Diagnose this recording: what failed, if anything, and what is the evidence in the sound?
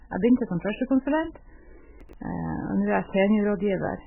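The speech has nothing above 3 kHz throughout and sounds heavily damaged: watery, swirling and smeared. The likely cause is a codec stage, MP3 compression at a very low bitrate, around 8 kbps. The encoder cut the treble and dropped weak frequency lines frame by frame.

From 2.01 to 2.13 s, just after "begynte som førstekonsulent", the audio jumbles briefly. This is chunks out of order at the buffer or storage stage. A 42.67 ms block played late, which points to about two blocks' delay. That left hard joins.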